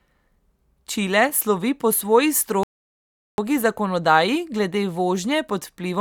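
At 2.63 s, just after "slovi po svoji", the speech halts in a rebuffering stall. The player ran out of downloaded audio and waited for more. Silence lasts until 3.38 s, about 0.75 s. Speech then resumes exactly where it stopped, with nothing skipped.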